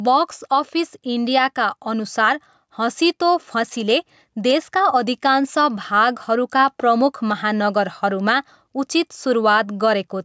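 A speech recording with gain pumping throughout, likely from input gain set far too high with a fast limiter or compressor clamping down on every loud syllable. The gain swings by around 5 dB under louder sounds, leaving the level squashed, while the call's microphone processing trims the lowest bass and leaves nothing above 8 kHz.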